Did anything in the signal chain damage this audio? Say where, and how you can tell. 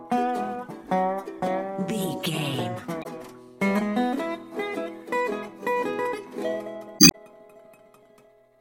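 Yes, in the codec stage: damaged data in a compressed stream. Short disruptions at 2.99 to 3.06 s and 6.96 to 7.15 s show corrupted frames. The decoder misreads them, loses frame sync, and resumes at the next valid header.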